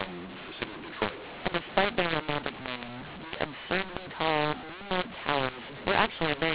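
Speech heard through a G.711 telephone path, with mu-law and A-law mixed up for the whole clip: A-law samples are decoded as mu-law, scrambling levels so the voice turns harsh and gritty, and pauses fill with hiss. Unlike clipping, peaks aren't flattened; quiet passages become noisy instead.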